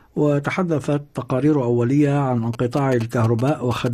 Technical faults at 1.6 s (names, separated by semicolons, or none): none